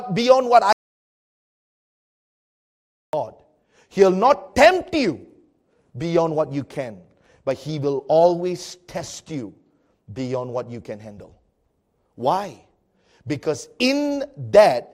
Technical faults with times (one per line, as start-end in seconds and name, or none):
0.73-3.13 audio dropout to silence